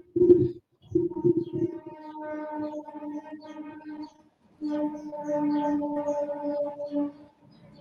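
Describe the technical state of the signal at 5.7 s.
At 5.7 s the speech is inside a stretch of scattered short gaps running from 3.93 to 5.98 s. A handful of packets, around four, went missing or arrived late, none much longer than about 20 ms, and the receiver filled each by extending the preceding sound, about 80 ms lost and 100 ms rebuilt in total. The result is brief ticks or smeared hiccups. Unlike one long dropout, these are isolated and tiny, and there is no silence.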